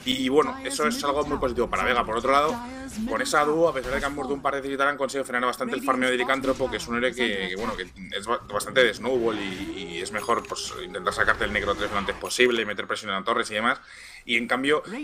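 Nothing technically wrong turns up anywhere in this audio, so there's really nothing here to flag.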